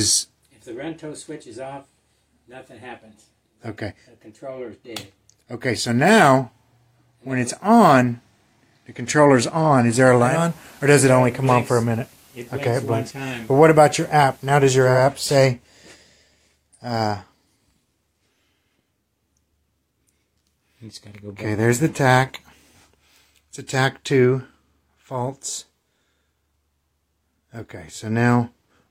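From 10.17 to 15.08 s, digital radio blending to analogue: losing digital, it cross-fades to FM over 285 ms. Hiss roughly 30 dB down lifts the spectrogram's floor; the waveform dips about 1 dB.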